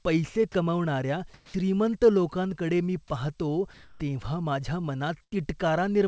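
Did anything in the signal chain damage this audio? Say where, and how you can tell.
Yes. In two pauses the real background gives way to a steady, featureless hiss: from 1.34 to 1.54 s, about 9 dB quieter than the surrounding background, and from 3.74 to 4.00 s, about 5 dB louder. This is comfort noise in place of the background, a call-processing artefact. The sender's discontinuous transmission likely stopped sending during these pauses, and the receiver filled the 200 ms and 260 ms gaps with synthetic noise that only roughly matches the background's level and colour.

At 1.54 s the sound returns with a hard, abrupt start instead of a soft rise, and the comfort noise runs from 1.48 s until then. This is an onset clipped by the voice detector. The detector was likely slow to register that sound had resumed, so the first 60 ms were never sent, and the receiver's synthetic noise covered the space where that opening should have been.

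From 5.24 to 5.33 s the sound is held and fades away for about 75 ms, then jumps forward. This is a burst of packet loss on the network. About 80 ms of audio never arrived in time to play. The receiver's concealment extended the last good sound and faded it down, and when the stream resumed, the material in between was missing, which is why the sound skips ahead.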